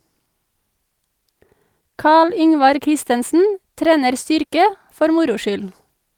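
No technical fault can be heard anywhere in the speech recording. Nothing interrupts or disturbs the audio at any point.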